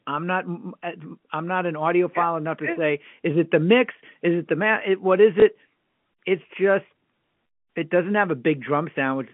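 At 5.4 s a single 20 ms stretch of the speech is replaced by a repeat of the packet just before it: packet loss with last packet repeated. The copied block seldom lines up with the pitch period, so the repeat comes across as a small blip. On a waveform it shows as one 20 ms segment identical to its neighbour, with small discontinuities at each edge. The spectrogram shows faint vertical lines at those joins, within the 150 Hz to 3.4 kHz band of the G.711 telephone coding.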